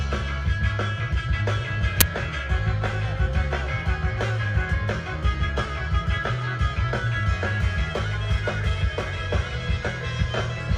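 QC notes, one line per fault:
2.01 s, uninitialised buffer: a sudden, loud burst of digital noise lasting about 11 ms, as leftover memory was played as sound, which fits a 512-sample buffer.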